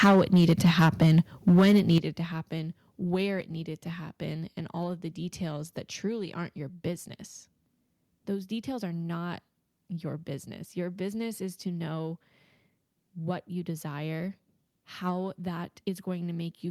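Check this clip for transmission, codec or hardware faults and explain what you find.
Two hardware-side problems show up in the first two seconds of this speech, both in the microphone input path.

Microphone overload, 0.01 to 1.2 s and 1.47 to 1.98 s: the input volume was likely set too high, pushing peaks roughly 12 dB and then about 7 dB past the converter's ceiling. The tops of the waveform are flattened, around a tenth of the samples in the first stretch and about 15 percent in the second. The loudest syllables take on a harsh, crackly edge.

Microphone volume stepped down, at 0.04 s and 1.98 s: the call software, likely reacting to those clipped peaks, cut the device's input gain in a single jump, about 4 dB the first time and about 11 dB the second. Voice and background fall together with no fade. The second drop lands right before "to happen where", so that phrase arrives distinctly quieter than what came before it.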